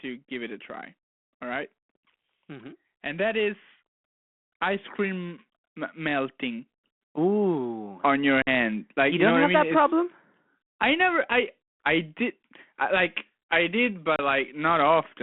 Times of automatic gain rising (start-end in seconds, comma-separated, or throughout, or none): 5.96-8.31